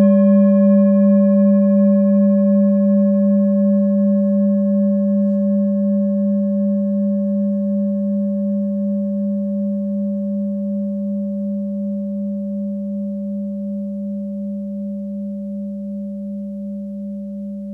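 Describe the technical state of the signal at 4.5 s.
At 4.5 s the audio is intact, with no dropout, clipping, glitch or other fault to be heard.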